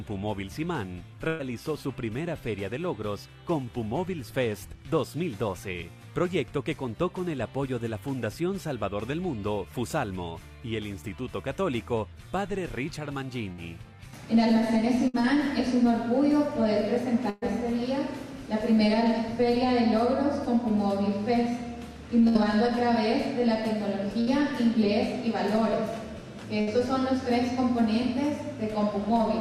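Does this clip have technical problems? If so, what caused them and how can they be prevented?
Yes. A burst of packet loss hit at 1.27, 13.52, 15.08, 17.30, 22.28, 24.21 and 26.61 s. Consecutive packets were lost, 120 ms at 1.27 and 17.30 s and 60 ms elsewhere. The receiver held and faded the last sound, then skipped ahead. Forward error correction and a deeper jitter buffer would prevent it.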